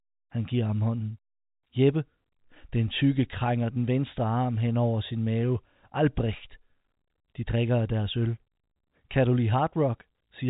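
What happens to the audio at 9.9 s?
Nothing goes wrong at 9.9 s; the speech carries on intact through that moment, still within the narrow telephone band of the G.711 coding, with nothing above about 3.8 kHz.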